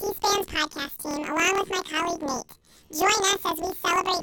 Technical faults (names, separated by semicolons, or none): planar audio read as interleaved